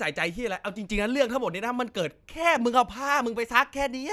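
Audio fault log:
No technical faults are audible; the speech signal stays continuous and steady in level across the whole clip.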